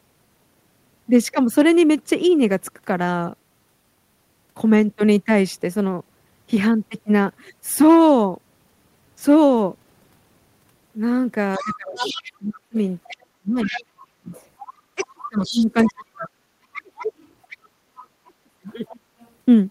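Other side's voice leaking through begins at 11.54 to 13.08 s: a second, fainter voice sits about 15 dB under the talker, likely echo the canceller failed to remove from the loudspeaker pickup. Speech suppressed in double talk overlaps it from 11.59 to 14.32 s, with the talker's voice dipping and cutting out for around two seconds in total, by as much as about 35 dB, likely because the canceller turned both voices down while both sides spoke at once. The leaking voice returns from 13.62 to 15.93 s, again roughly 15 dB below the speech, likely uncancelled loudspeaker echo. Suppression hits the talker again from 14.95 to 17.12 s, chopping out about a second and a half with drops near 35 dB, likely the double-talk fault repeating. A quieter echo leaks through from 17.22 to 18.05 s at about 25 dB down, likely residual loudspeaker pickup. The talker is squashed once more from 17.82 to 19.08 s, losing well under a second with dips around 35 dB, likely from the same suppression. 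A last faint trace of the other side's voice leaking through, about 35 dB down, runs from 18.67 to 19.28 s, likely leftover echo.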